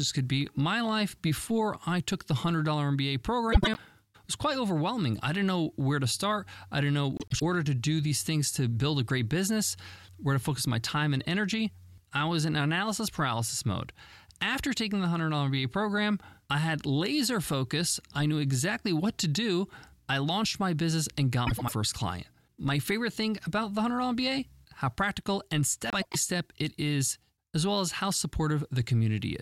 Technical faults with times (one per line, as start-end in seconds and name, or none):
3.52-3.78 frames out of order
7.17-7.42 frames out of order
21.47-21.73 frames out of order
25.90-26.16 frames out of order